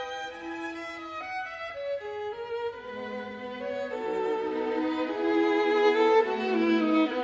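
No technical faults are audible.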